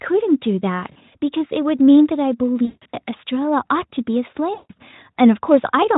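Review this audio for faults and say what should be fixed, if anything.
VoIP packet loss concealed by the speech codec hits at 0.91–0.97 s, 2.65–2.98 s and 4.53–4.71 s. The decoder smears the last sound into a buzzy, fading tone, and it's worst around 2.7 s, where gaps add up to 220 ms. A bigger jitter buffer, or FEC on the link, should cover that loss.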